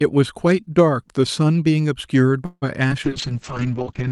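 A speech recording carried over a call, and three faults are audible near the end. From 2.45 to 2.64 s the sound stalls. The last moment is drawn out into a fading buzz that drops to about 40 ms of silence, and then the speech resumes exactly where it stopped. This is a call audio freeze, likely caused by packets arriving late so that the jitter buffer ran dry. The receiver stretched what it had over roughly 164 ms, which added that much delay without losing anything. At 2.88 to 2.92 s there is a brief smear, a tiny wobble in the sound. That is short concealed packet loss. About 20 ms of audio never reached the decoder in time, and the receiver covered the hole with a synthesised continuation of the preceding sound for about 23 ms before blending back into the real signal. From 3.05 s to the end, a little over one second, the speech turns rough, watery and noticeably duller. That is a call bitrate drop. 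The bandwidth estimate collapsed, and the coarse, gritty texture points to the Opus encoder falling from roughly 64 kbps to something near 7 kbps. At the same time the audio band narrows from a 12 kHz cut-off to 8 kHz, which takes away the crispness of the upper frequencies.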